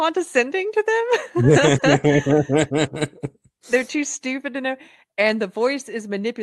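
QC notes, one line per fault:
Throughout: clock drift between sender and receiver. The sending clock runs slow by roughly one and a half percent, so the receiver's jitter buffer keeps draining and must be topped up to avoid running dry. The result is a faint, recurring unevenness in timing rather than any single obvious glitch. On a waveform it looks like normal speech. On a spectrogram the Opus band edge stays fixed at 12 kHz.
0.44 to 6.23 s: repeated timing corrections. To keep pace with the slow sender, the receiver repeatedly repeats short slices of audio. Across the stretch these add up to around a tenth of a second, so playback runs at 98% speed. The edits are small and unevenly spaced, heard, if at all, as slight hiccups or a subtly dragging tempo. A spectrogram shows occasional duplicated frame textures or smeared onsets. The waveform shows tiny seams where repeated pieces join.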